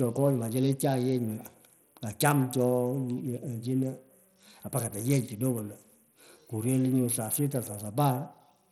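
Throughout, the speech carries gritty grain and flickering treble, with nothing above 18.2 kHz. This is likely Bluetooth SBC compression starving its upper bands, which fits about 80 kbps.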